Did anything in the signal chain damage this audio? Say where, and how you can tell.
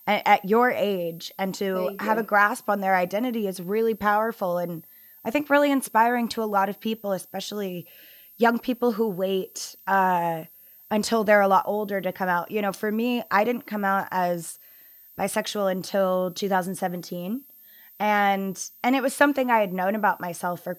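Yes. There's a switching supply whistle in the analogue side, present for the whole clip. A thin, high tone sits between about 13.2 and 13.4 kHz, wandering a little within that band, roughly 25 dB below the speech. That's a switch-mode power supply dropping into an audible burst mode or beating against another supply, with its ripple leaking into the analogue path before the converter.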